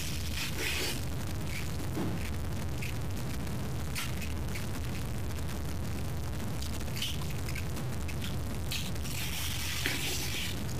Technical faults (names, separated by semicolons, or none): stuck bit